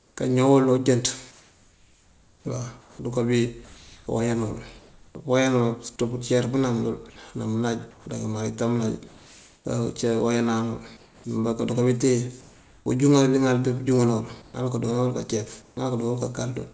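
From 0.0 to 5.15 s the pauses carry comfort noise in place of the background. About 2.3 s of real ambience is replaced by a steady, featureless hiss, likely synthesised at the receiver while the sender's discontinuous transmission sent only occasional updates. Inside that stretch, from 3.65 to 4.07 s, sound is dropped by the voice detector. About 0.17 s of the speech vanishes under 0.42 s of the same flat noise, likely because the detector took it for background. The comfort noise returns from 7.91 to 9.65 s, 10.97 to 12.86 s and 14.42 to 15.77 s, covering about 0.72 s, 0.72 s and 0.27 s of background. Nothing is heard above 8 kHz, which fits a wideband call codec.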